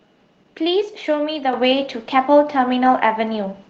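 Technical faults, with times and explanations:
1.53 s: microphone volume stepped up. Input gain rose by about 6 dB in one step, so speech and background jump louder together.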